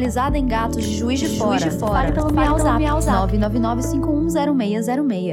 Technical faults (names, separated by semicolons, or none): doubled audio track